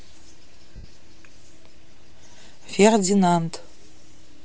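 Throughout the speech there is a breathy, grainy edge: the upper frequencies sound hollowed out and replaced by a fizzy, noise-like texture, and the damage is plainly audible rather than subtle. This is likely Bluetooth LC3 compression, the transform codec used by LE Audio. At a low bitrate, consistent with around 32 kbps and 10 ms frames, the encoder cannot afford detail in the upper spectrum, so it zeroes those bands and the decoder fills them with noise.

From 0.76 to 0.84 s the sound briefly turns into a smeared, noisy blur lasting about 80 ms, losing its clear shape before the speech resumes. These are lost LE Audio frames. The gap fits several consecutive 10 ms frames going missing over the Bluetooth link. The decoder covered the hole by reusing the last received spectrum with its signs randomised, which is why the smear sounds like noise, and it faded that substitute away as the loss continued.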